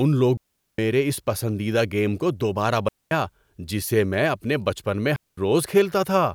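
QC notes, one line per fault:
0.37–0.78 s, 2.88–3.11 s, 5.16–5.38 s: digital wireless dropout. The speech cuts to near silence for 0.41 s, 0.23 s and 0.21 s. The receiver lost too much data and muted with a very fast fade. Each hole is clean, with no noise burst on either side.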